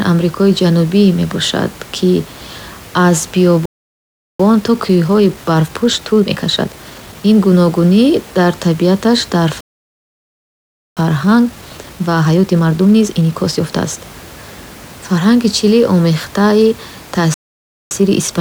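Playback stall at 3.65 s: the speech drops to silence for about 0.74 s, likely because the player ran out of buffered data or its thread was held up. It then resumes where it stopped.

Time-compressed catch-up follows from 4.40 to 7.34 s, ending just before "гуногунӣ дар табиаташ дар". The player clears its backlog by cutting out short slices and cross-fading the joins, so the speech runs 1.25 times fast at unchanged pitch.

The same pair returns right after "гуногунӣ дар табиаташ дар". Silence runs from 9.61 to 10.97 s, about 1.36 s, and hurried speech at 1.25 times follows until 13.97 s.

A third stall of about 0.57 s at 17.34 s gives way to a milder catch-up at 1.15 times from 17.91 s to the end. Low room noise, about 23 dB below the speech, sits under the recording throughout.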